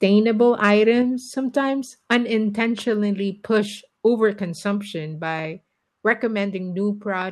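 At 1.02 s the whole speech signal, voice and background together, drops abruptly by about 4 dB and stays at the lower level. This is a microphone volume stepped down event: the level change is a single discrete step with no fade, which points to the input volume of the capture device being reduced in one move. The likely cause is the call software's automatic gain control judging the input too hot and lowering it.

From 2.11 to 2.15 s the loudest part of the speech runs about 3 dB past full scale, and a small fraction of samples, around 2 percent, are flattened at the ceiling. This is microphone overload: the waveform peaks are squared off at the converter's limit, producing a brief harsh, crackly edge on that syllable. The input volume was likely set too high for that peak, even after the earlier reduction.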